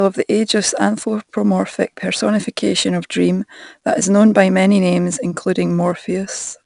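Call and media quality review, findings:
4-bit ADPCM compression throughout: gritty, level-tracking hiss on loud speech, roughened attacks, top end dead above 10.6 kHz. Sounds like a roughly 89 kbps encoder whose step size can't keep up.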